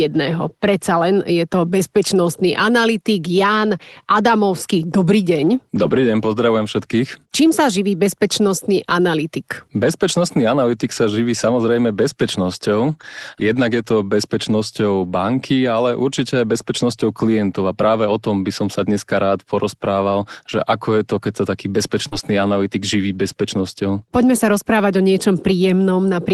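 Lost packets rebuilt from error correction appear at 4.77 s, from 5.83 to 5.93 s just before "deň pozdravujem všetkých", from 8.47 to 8.49 s right after "sa živí", and from 14.99 to 15.05 s. Each loss was filled from a low-quality copy carried in the next packet, so there is no gap, only brief roughness. On a spectrogram these spans show grainier, noisier texture in this 12 kHz Opus call.

A short concealed packet loss runs from 22.07 to 22.13 s, between "to keď sa taký" and "analytik živí bezpečnosťou". About 40 ms never arrived, and the decoder extended the preceding sound to cover it, heard as a quick smear. Its last 20 ms, 22.11 to 22.13 s, were rebuilt from error correction.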